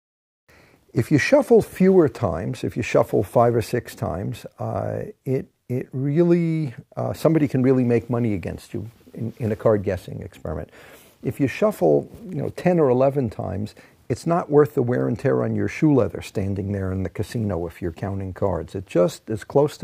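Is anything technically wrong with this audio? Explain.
No, nothing technically wrong can be heard here.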